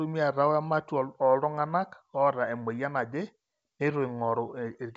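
Nothing here counts as a fault; the speech simply comes over G.722 wideband telephone coding at 64 kbit/s, which is why the top end runs out at around 7.7 kHz, and that's just how this kind of link normally sounds.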